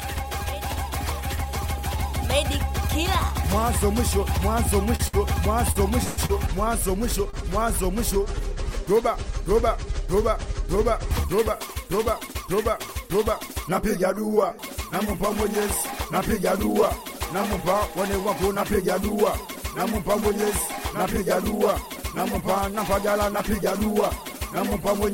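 From 4.95 to 6.31 s the audio drags and stutters: it keeps hanging on what it was just playing, five times in that stretch, the longest hold lasting 142 ms and fading out as it goes on. These are repeated stalls (stutter). Packets kept arriving late or too slowly, so the jitter buffer ran dry again and again. The receiver covered each gap by continuing the last sound, 319 ms in all, about 23% of that span. Nothing is skipped; the audio just loses its flow.

At 7.30 s a sound is held a little too long, for 38 ms, with a faint buzzy or dipped quality before the audio picks up exactly where it left off. This is a short stall from a late packet. One packet missed its moment, the buffer emptied, and the receiver stretched the last bit of sound until the packet turned up. It came 38 ms late, so the hold is brief and nothing is lost.

From 21.82 to 24.19 s the audio runs slightly fast, about 3% quicker, at unchanged pitch. 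This is a jitter buffer speed-up. The buffer had built up more audio than it aims to hold, so the receiver trimmed many tiny slices, each one or a few pitch periods long, until around 70 ms had been removed and the delay was back down.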